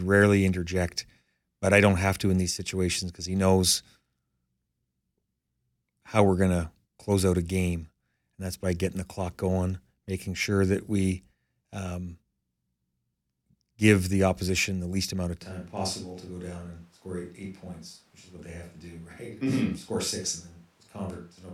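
The close microphone's feed most likely dropped out at 15.42 s, leaving this speech clip on a switch to a distant microphone that lasts until the end of the recording. From that point the speech turns roomy and hollow, loses bass, falls by around 5 dB, and sits over room noise roughly 30 dB below it. The change is abrupt rather than gradual, and the close sound never returns.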